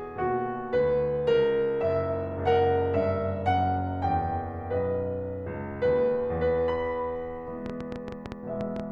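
A music recording with a train of clicks from 7.66 to 8.81 s: roughly ten similar pops at about 9.7 per second, unevenly spaced and about 10 dB above the music, likely from interference or a faulty connection.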